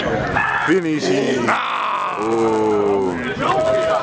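From 0.32 s to the end, the resampler restarted on every block. The 48 kHz to 16 kHz conversion was run separately on each 10 ms block, so its filter lacked true neighbouring samples at every edge. The result is a buzz at 100 Hz that rides on the signal and drops out where the audio falls silent. A spectrogram shows faint vertical lines every 10 ms and harmonics of 100 Hz. In the waveform, small discontinuities recur at block boundaries.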